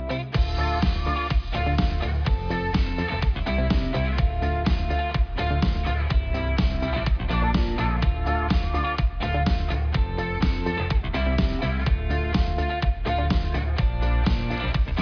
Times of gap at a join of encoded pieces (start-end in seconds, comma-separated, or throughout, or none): none